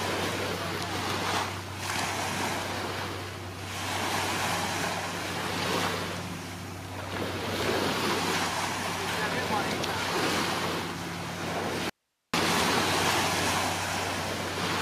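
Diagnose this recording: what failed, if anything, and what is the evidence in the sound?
Audio dropout to a faint residue, 11.90 to 12.34 s: the sound cuts abruptly for 440 ms to hiss about 50 dB down, showing as a near-flat waveform with sharp edges. The cause is likely an intermittent analogue connection.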